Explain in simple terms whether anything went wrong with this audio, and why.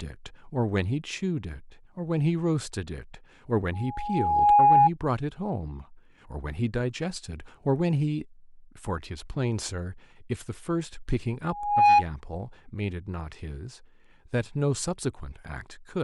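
A microphone was picking up the loudspeaker it fed, causing loudspeaker feedback squeal: one pitch, around 826 Hz, kept looping and growing. In this speech it swells into a loud whistle from 3.73 to 4.90 s, and again, building faster, from 11.50 to 12.04 s.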